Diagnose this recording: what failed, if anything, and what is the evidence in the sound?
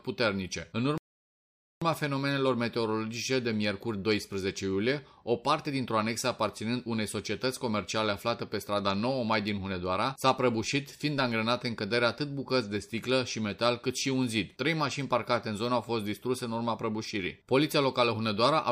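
A rebuffering stall at 0.98 to 1.82 s: playback starved of downloaded data, went silent, then resumed exactly where it stopped, adding 0.84 s without losing audio.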